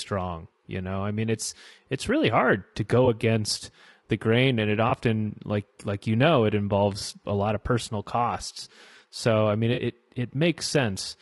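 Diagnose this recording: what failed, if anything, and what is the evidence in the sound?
At the codec stage, the speech was likely squeezed through low-delay AAC compression of the AAC-ELD kind used for calls. Its short frames resolve pitch harmonics poorly, so throughout the clip the speech sounds plainly rough and grainy, consistent with a bitrate near 32 kbps.

In transmission, AAC frame loss with concealment left the decoder patching gaps from the last good spectrum. Brief smeared, noisy patches appear at 3.05–3.08 s, 4.89–4.92 s and 6.99–7.03 s, each consistent with one lost frame, and a longer one at 9.73–9.79 s that suggests two frames in a row.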